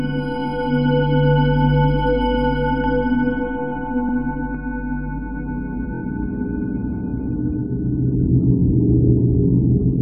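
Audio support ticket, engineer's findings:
Repeated frames, stutter at 4.08 s (46 ms block replayed once) and 5.93 s (23 ms block played three extra times). Duplicated compressed frames in the writer or transport. Unlike a dropout, nothing is missing: identical audio replays and lengthens playback.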